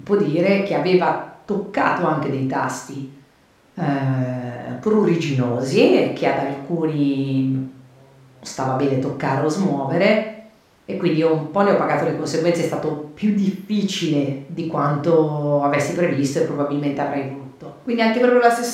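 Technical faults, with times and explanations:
No technical faults detected.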